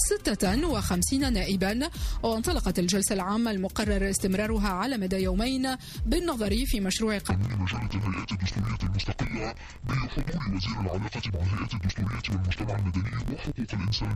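From 7.31 s to the end, interleaved audio is read as planar: each block's first half goes to the left channel and its second half to the right. Both halves play at half speed, so the sound drops an octave, and it is doubled and choppy from 21.33 ms blocks repeating at 46.9 Hz, which fits 1024-sample blocks.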